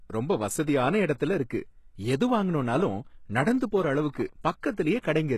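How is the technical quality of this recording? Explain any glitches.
The speech is clearly degraded throughout, with one brief pre-echo near the end.

HE-AAC compression, throughout: the treble is likely rebuilt by band replication rather than coded, leaving gritty, lispy s sounds, nothing above 12.3 kHz, and damage that fits roughly 16 kbps.

Pre-echo at 4.14 s: codec noise spread across one transform block leaks about 16 ms ahead of a sharp attack, heard as a short hiss before it.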